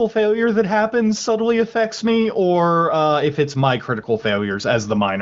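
No faults detected; the speech sits on an AMR wideband (HD Voice) path, with nothing above 7.5 kHz and coding texture consistent with one of the codec's upper bitrates.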